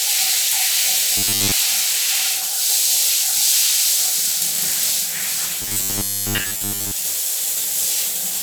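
From 1.17 to 1.52 s, and again from 5.62 to 6.92 s, the everyday sound turns into a rigid metallic buzz pitched at 100 Hz: robotic sound from repeated short buffers. Most of the audio is skipped, likely because a 10 ms chunk keeps being replayed.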